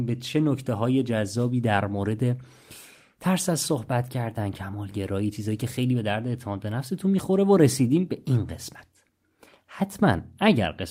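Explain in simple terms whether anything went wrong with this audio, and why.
Nothing went wrong here: the speech runs along without any dropouts, glitches or other technical hiccups to catch the ear.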